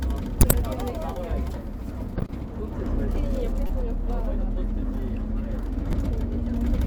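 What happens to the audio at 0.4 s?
At 0.41 s a corrupt frame is decoded, and the damage lasts until about 0.53 s. Bits inside a few compressed frames were flipped, yet the decoder played them. The misread gains and codes put energy at the wrong frequencies for each damaged frame. Over this everyday sound, the result is a glitch heard as a chirp, squeak, blip or burst of noise, lasting about an eighth of a second. It peaks at roughly -10 dBFS.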